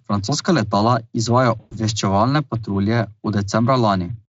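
Right after "letala izvajajo", at 1.59 s, there's a dropout running to about 1.75 s that's VoIP packet loss concealed by the speech codec. The gap points to roughly 120 ms of audio going missing, and the decoder, which sounds like Speex at a fairly generous rate, papers over it by extending the last pitch and spectral shape while turning the level down. You hear a short buzzy or noisy, smeared tail that fades rather than a clean cut.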